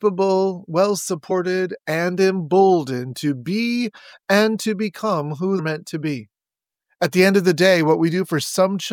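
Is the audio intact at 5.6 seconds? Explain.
No. At 5.58 s, compressed frames are skipped: about five frames of 26.1 ms each, roughly 150 ms of audio, are never decoded, so the sound jumps ahead.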